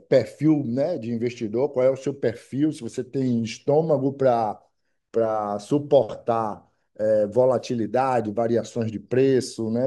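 A recording of speech with no technical fault audible anywhere in it.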